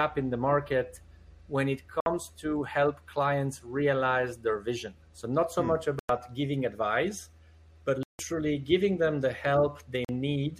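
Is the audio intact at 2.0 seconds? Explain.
No. At 2.00 s the sound cuts out in a Bluetooth dropout lasting until 2.06 s, about 58 ms of silence. The gap has abrupt edges or a fade of a few milliseconds. When the sound returns, it has moved on, as if it kept playing through the hole. This is likely a wireless link failure. Audio packets reached the headphones too late and were thrown away, so nothing played until good data arrived. The gap length fits about four lost packets.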